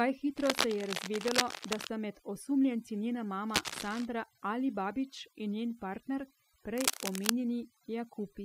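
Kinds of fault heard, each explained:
Overdone noise removal: Throughout the clip the gaps between phrases fall to near silence dotted with twinkling specks. This comes from noise reduction set far too aggressively. Any frequency band close to the tool's estimate of the background noise is pushed down or switched off, and the quieter parts of the speech that sit in those same bands get stripped away along with the noise.
Cable scratch noise: Three bursts of dense, uneven scratching and rustling sit over the speech, from 0.37 to 1.89 s, 3.49 to 4.06 s and 6.77 to 7.32 s. The first and last are roughly as loud as the speech, and the middle one is a little quieter. The likely cause is a worn cable, connector or control being handled, so that its contact resistance jumps around rapidly and injects these bursts of noise.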